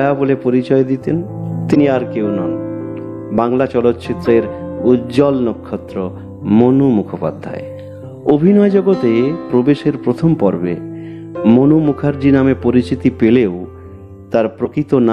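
Damaged data in the compressed stream at 1.71, 4.22 and 14.62 s: corrupted frames throw the decoder out of sync, each giving a brief 56 ms disturbance.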